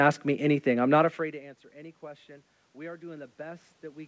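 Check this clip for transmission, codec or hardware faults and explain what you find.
One fault stands out: automatic gain rising, from 1.71 s to the end, right after "not afraid to answer". The level reaching the microphone falls by about 24 dB, and the gain control, finding the input too quiet, turns itself up gradually, so the sound swells back over the following seconds. What separates it from a talker simply moving closer is that the room noise climbs along with the voice. The talker's own drift around 1 s changes only the voice. The call path, which sounds like G.722 at 64 kbps with nothing above 8 kHz, adds no fault of its own.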